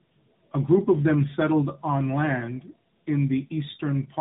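Throughout the speech there is tandem speech coding: the sound passed through two AMR-NB speech coders in a row, probably a higher-rate and a lower-rate mode, with a plain telephone-grade link between them. The second coder rebuilt an already degraded signal, so the artefacts compound. It sounds rough, muffled and warbly. On a spectrogram, nothing appears above 3.8 kHz, and harmonics look smeared and blotchy; the waveform shows a grainy envelope.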